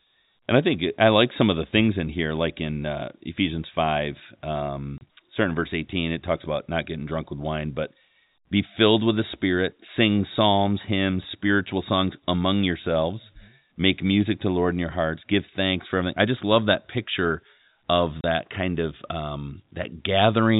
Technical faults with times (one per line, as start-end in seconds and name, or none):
4.98-5.01 packet loss filled with silence
18.21-18.24 packet loss filled with silence